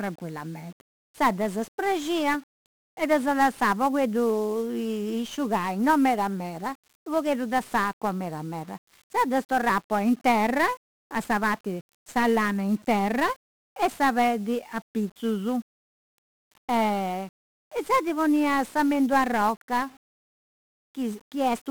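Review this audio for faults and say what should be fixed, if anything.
The whole of the speech carries 1-bit DFPWM compression, from start to finish. Each sample keeps only one bit, nudging an adaptive level up or down, so the coder leaves dense quantisation noise that makes every syllable fuzzy and crackly, with the treble sunk under hiss. The damage is heavy and fits a rate of about 48 kbps. A spectrogram shows a grey broadband noise floor covering the upper bands. The waveform looks jagged and stepped. To prevent this, keep speech in a multi-bit codec.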